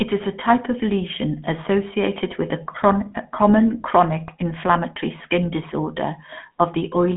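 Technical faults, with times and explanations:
Throughout, GSM full-rate codec: plainly buzzy, gravelly speech from coarse pulse-driven vocal-tract modelling, consistent with 13 kbps, with nothing above 3.8 kHz.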